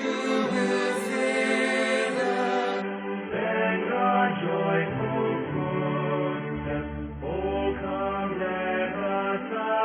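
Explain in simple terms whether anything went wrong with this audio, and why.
From 2.82 seconds to the end, the sound suddenly turns dull and muffled, losing everything above about 3.3 kHz, with no gap. This is an adaptive stream at a lower bitrate: a slower connection made the player switch to a smaller, lower-quality version.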